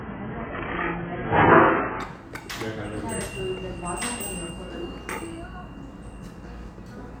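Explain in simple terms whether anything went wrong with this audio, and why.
The stream started at a low bitrate: to begin playing quickly, the player first fetched a cheap, low-quality version, then switched to a better one at 2.0 s. Until then everything above 3.4 kHz is missing, so the sound is dull and smeared, and then it suddenly becomes clear, without a gap.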